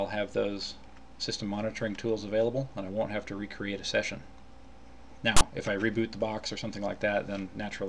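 At 5.37 s a harsh, loud rasp cuts in, lasting about 43 ms until 5.41 s, with abrupt edges on both sides and a lopsided, buzzy quality. This is file tags played as audio: a block of text metadata was decoded as though it were sample data. Because text characters cluster in a narrow range of byte values, the resulting waveform sits offset to one side of zero, giving that grating, asymmetric burst rather than even static.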